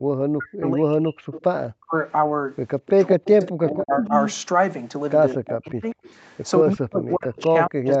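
Speech with speech suppressed in double talk from 0.06 to 1.94 s, 2.92 to 4.11 s, 5.35 to 5.96 s and 6.62 s to the end, where the voice dips by as much as about 40 dB or drops out in pieces. The likely cause is an echo canceller turning down the near talker while the far side speaks. Echo leak appears at 1.32 to 1.43 s, 2.81 to 3.72 s and 5.46 to 6.1 s as a copy of the speech delayed by 205 ms, about 10 to 15 dB below it. This is likely loudspeaker pickup that the far end's echo canceller did not fully remove.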